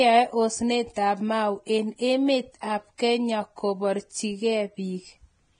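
Hiss and graininess run through the whole speech recording. Tones sound roughened, and nothing is audible above about 9.7 kHz, so the top end is dull even where it fizzes. The heavy damage likely comes from Vorbis compression at a low setting, which fits a bitrate of roughly 22 kbps. The codec cuts the treble off early and quantises what remains so coarsely that fine detail turns into noise. Two short pre-echo smears also appear. A short hiss fills 2.61 to 2.63 s, spreading over about 23 ms just after "en emet". A similar hiss of about 17 ms comes at 2.98 s, right after "en emet ap". In each case a sharp onset sits late in a transform block. The quantisation noise, sized for that loud onset, leaks back into the quiet moment before it and softens the attack.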